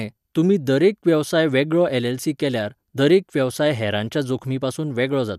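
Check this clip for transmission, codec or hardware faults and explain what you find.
Nothing faulty turns up anywhere in the recording. The speech continues without any event worth pointing to.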